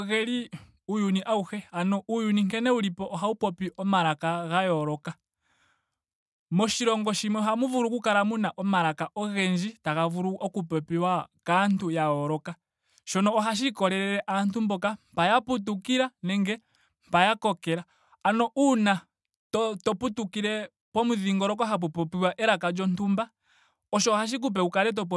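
A recording of speech with no technical fault to report. Nothing in it calls for a time or a cause.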